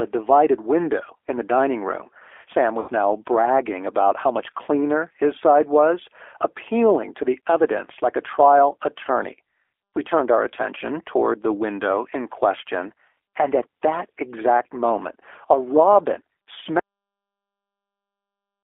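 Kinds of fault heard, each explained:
G.729 codec: Throughout, the speech has the slightly rough, synthetic texture of a low-rate vocal-tract model with a few pulses per frame. The band is held to roughly 300 Hz–3.5 kHz, and the 8 kbit/s coding damage is plainly audible.
VoIP packet loss concealed by the speech codec: From 2.80 to 2.91 s, about 80 ms of audio went missing, which fits four lost 20 ms packets. The decoder stretched its last pitch and filter into a fading sound, and the voice returns, still weakened at first, with "now bragging about how".
cut-off end: At 16.79 s, right after "exact moment a robin", the speech stops mid-sound and falls straight to digital silence with no natural decay. The final buffers were never written or played out.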